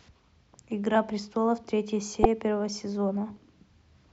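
At 2.21 s the speech breaks up briefly for about 44 ms, to 2.25 s: damaged data in a compressed stream. Corrupted bytes made the decoder misread frames and lose sync.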